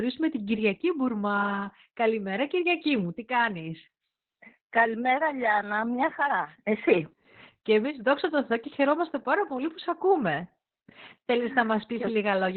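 Heavy Opus voice compression runs through the whole speech clip. The codec stays in its SILK mode and narrows the band, so nothing is heard above 4.2 kHz. The voice sounds muffled, hoarse and slightly robotic, which fits a very low bitrate near 8 kbps.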